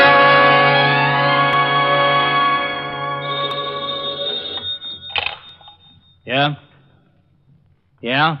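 Audio missing between chunks first appears at 1.53 s as a sudden skip, where roughly 20 ms of sound vanishes and the two sides butt together with no gap. It recurs at 3.51, 5.49 and 7.47 s, about every 2.0 s. That regularity likely comes from a recorder or processor handling the signal in 2-second blocks and dropping a sliver each time it closes one block and opens the next.

DAB burbling runs from 2.63 to 2.94 s. The sound breaks up into short blips of noise in individual frequency bands. This points to weak DAB reception: a small fraction of bit errors, on the order of a fifth of a percent, slipped past error correction into the MP2 data, corrupting samples across 16 frames. A second, briefer burst of the same kind occurs at 4.92 s.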